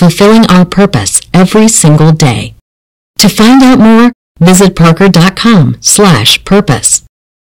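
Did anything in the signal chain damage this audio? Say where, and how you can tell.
Yes. Hard clipping runs through the whole speech clip, and it happened at a gain stage or converter that was driven about 18 dB past its ceiling. Roughly 30% of the samples were cut flat at that stage's limit. On the waveform the peaks are sliced into flat plateaus at both rails. A spectrogram shows dense harmonic smear reaching far above the voice's natural range on every loud syllable. To the ear it is a harsh fuzz on every loud sound, not an occasional crackle.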